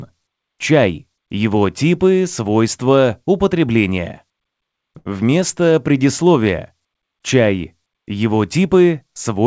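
A short stall from a late packet runs from 4.98 to 5.07 s. A packet failed to arrive on time, the jitter buffer ran dry, and the receiver held the last sound for about 75 ms until the data turned up, then carried on from the same point. Nothing is lost, but the sound hangs unnaturally with a faint buzz or dip, and everything after it plays about 75 ms later. This happens over a call path whose content stops at 8 kHz, which fits a 64 kbps G.722 codec.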